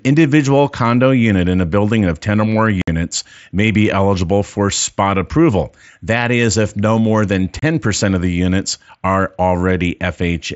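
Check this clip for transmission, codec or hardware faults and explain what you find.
The clip has one fault, unconcealed Bluetooth headset packet loss, occurring twice: 2.82 to 2.88 s (60 ms) and 7.59 to 7.63 s (30 ms). Voice packets between headset and phone never arrived and nothing concealed the gap, so silence or an idle pattern fills each hole and the speech drops out with hard edges. The longer hole fits a run of about eight 7.5 ms mSBC frames, the shorter about four. Over the mSBC link itself, light grainy coding noise can be heard, with speech limited to 8 kHz.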